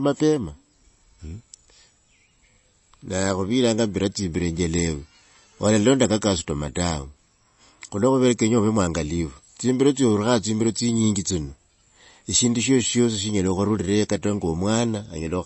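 Heavy MP3 compression is the likely cause of the damage running through this speech recording from start to finish. The encoder appears starved of bits, which fits a bitrate around 32 kbps, so it discards everything above 8 kHz and drops weak frequency lines that flicker between frames, leaving a dull, watery, swirling quality with plainly audible smearing.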